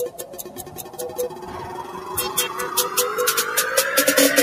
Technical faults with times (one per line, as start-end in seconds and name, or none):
0.00-4.42 noise suppressor applied to music or sounds
0.10-1.97 sound cut by the noise suppressor